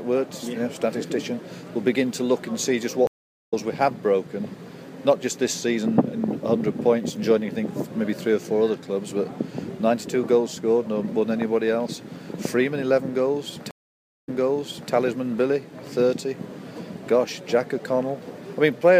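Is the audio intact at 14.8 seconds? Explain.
No. At 14.8 seconds the sound is inside a stream reconnect spanning 13.71 to 14.93 s: after a silence of about 0.57 s a fresh decoder restarts, so the audio resumes 0.65 s earlier and repeats material. That repetition distinguishes it from a plain dropout, which would simply continue.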